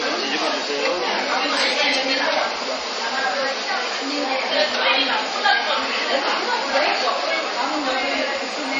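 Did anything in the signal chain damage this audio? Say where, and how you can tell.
Yes, at the codec stage. Across the whole clip nothing sounds above 8.2 kHz, and compression damage is plainly audible. That hard treble ceiling likely comes from MP3 compression at a low bitrate, fitting about 32 kbps. The starved encoder cuts high frequencies and zeroes weak components.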